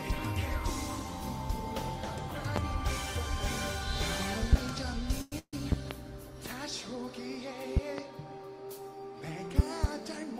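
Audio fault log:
2.56, 4.53, 5.72 to 5.94, 7.77 to 8.01 and 9.59 to 9.87 s: loud pop, single at the first two and a close pair at each of the last three, about 20 to 25 dB above the sound. The sound carries on underneath, so unlike a dropout nothing is lost. A voltage pulse, likely from a plug, switch, static or driver glitch, rides on top.
5.21 to 5.33 and 5.39 to 5.54 s: call audio freeze, filling 103 ms and then 140 ms with the last sound stretched into a fading buzz or hiss, which falls to silence for about 50 ms in the second. Afterwards the audio resumes where it stopped with nothing missing, which sets it apart from a dropout. A jitter buffer running empty while packets were held up is the likely cause.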